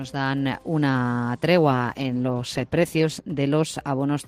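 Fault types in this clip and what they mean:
call bitrate drop: From 1.72 s to 3.31 s the audio turns coarser and rougher, losing detail and clarity, then recovers. The degraded stretch lasts about 1.5 s. The call's bandwidth estimate fell, so the encoder was told to spend far fewer bits and coded the signal more crudely. The change in quality fits a fall from around 32 kbps to about 14 kbps before the rate climbs back.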